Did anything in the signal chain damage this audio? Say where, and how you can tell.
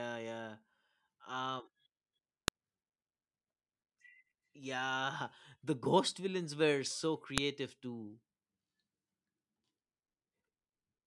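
Yes. At storage or file-joining, a file header played as audio: sharp snaps at 2.48 s and 7.38 s (after "ghost villains were so"). Unremoved header bytes play as samples. Unlike dropout clicks, they mark where pieces were joined and ignore the speech.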